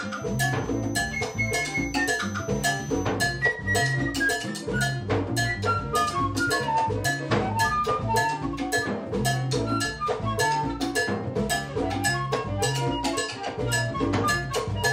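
A thin feedback whistle at 6.1 kHz sits behind the sound from 0.0 to 3.19 s, roughly 20 dB below it and swelling and fading slowly in level. It is likely a loudspeaker-to-microphone loop held just at the edge of feedback, so one frequency keeps ringing without building up. Unlike mains hum, it is a single high pitch with no low harmonic series, and unlike a fixed interference tone, its level drifts rather than staying constant.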